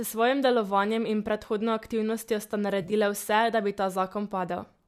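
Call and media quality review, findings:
AAC frame loss with concealment, 2.82–2.93 s, between "in predhodno aktivnostjo sta" and "vse da bi". Smeared, phasey, noisy patch, about 60 ms missing across 100 ms, longest gap around 30 ms. Decoder refilling lost frames from last good spectrum, consistent with several short frames from the likely AAC-ELD path. Spectrogram: harmonics blur into flat noise in broken slices. Waveform: no hard gap.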